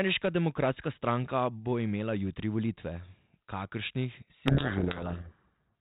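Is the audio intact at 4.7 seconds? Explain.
No. A codec payload misread runs from 4.46 to 5.72 s: the G.726 code words are decoded in reversed bit order, burying the speech in harsh distortion.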